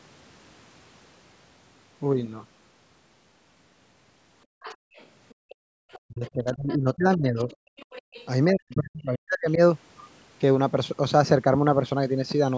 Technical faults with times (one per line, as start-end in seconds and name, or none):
4.46-4.95 background gated by the echo canceller
4.61-5.55 other side's voice leaking through
5.34-5.79 background gated by the echo canceller
5.92-6.76 other side's voice leaking through
6.07-7.48 speech suppressed in double talk
7.49-8.26 other side's voice leaking through
8.51-9.60 speech suppressed in double talk